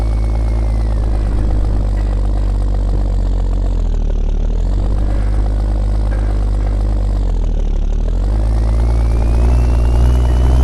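Nothing in this one gives a listener anything to flag: the sound just runs along with no dropouts, glitches or other faults.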